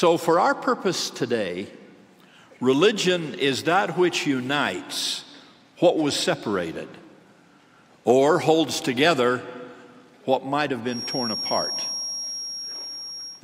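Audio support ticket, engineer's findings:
Feedback whistle, 10.84 s to 13.44 s. Thin steady tone near 5.6 kHz, about 10 dB under the programme, level swelling and fading slowly. Likely a loudspeaker-to-mic loop held at the edge of oscillation; one resonant frequency sustains without running away.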